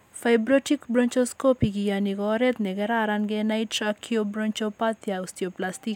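Nothing in the speech stood out as a problem on listening.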